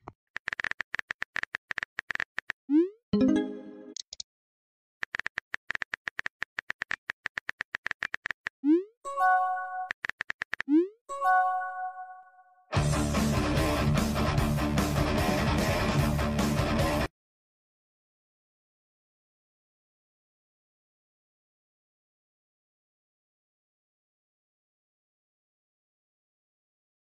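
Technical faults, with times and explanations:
8.20–8.27 s, corrupt frame muted: flipped bits left a compressed frame undecodable, so the decoder rejected it and the player substituted silence. The sound drops abruptly into a gap of about 76 ms, which fits a single lost frame, then resumes without any shift in timing.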